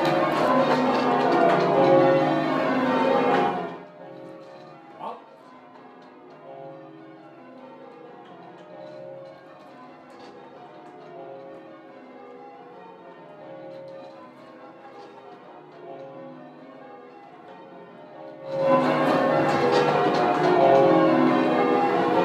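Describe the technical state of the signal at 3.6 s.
Zipper noise spans 3.46–3.9 s: an unsmoothed fade of about 25 dB in 1 dB steps, roughly fifty a second, ticks, showing a staircase envelope and vertical spectrogram streaks.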